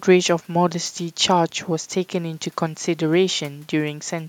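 Nothing stood out as a technical problem on listening to the speech in this recording.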